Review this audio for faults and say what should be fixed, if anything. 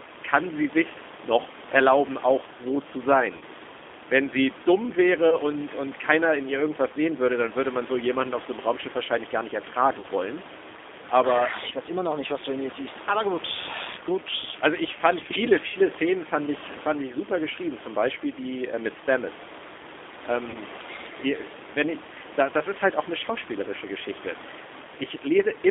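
The whole clip carries G.729 codec damage, plainly audible. The line passes only about 250 Hz to 3.6 kHz, and the speech sounds rough and synthetic because it is rebuilt from a vocal-tract filter, pitch predictor and sparse pulses at 8 kbit/s. On a spectrogram, energy stops sharply near 3.6 kHz, and the room noise, about 14 dB below the speech, shows a grainy texture. Use a wideband codec such as G.722 or Opus.

VoIP packet loss concealed by the speech codec occurs at 3.37–3.43 s, 5.30–5.37 s, 10.01–10.06 s, 15.68–15.77 s and 20.50–20.57 s. The lost stretches are 40, 20, 20, 60 and 40 ms, which fits one to three 20 ms packets. In each gap, the decoder repeats its last pitch and filter with falling gain, producing a buzzy tone or coloured noise that fades. The waveform shows repeated periods that shrink in amplitude, and the spectrogram shows flat harmonic smears before normal speech resumes. 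Add forward error correction or jitter buffering and prioritise voice traffic.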